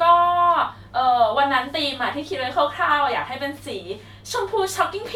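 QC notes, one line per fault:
No faults found in this speech clip. Nothing calls for a timed entry.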